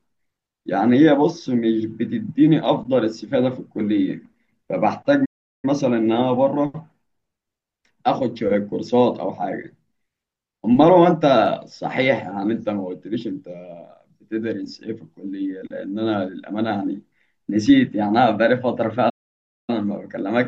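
At 5.25 s the speech cuts to silence for about 0.38 s, then resumes. A second gap at 19.09 s lasts about 0.59 s. These playback stalls likely come from the player running short of data.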